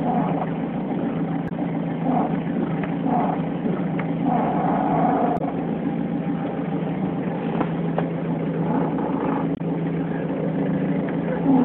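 Damaged data in a compressed stream appears at 1.45–1.52 s, 5.34–5.41 s and 9.52–9.61 s. Each time, corrupted bytes make the decoder misread frames and lose sync until it finds a valid header, producing a brief squawk or blip of about 70–80 ms.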